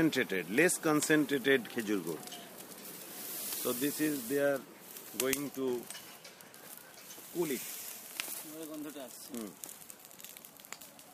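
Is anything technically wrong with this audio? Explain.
No, nothing technically wrong is audible anywhere in this audio.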